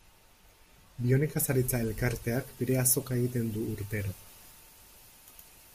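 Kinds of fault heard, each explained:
Pre-emphasis left on: from about 1.37 s to the end, the speech turns thin, bright and hissy, with sibilants standing out sharply and little body underneath. The treble was lifted before storage or transmission, and the complementary de-emphasis on playback never happened, so the top end sits about 8 dB higher at 10 kHz than at 1 kHz. That tilt fits the CD 50/15 µs emphasis curve.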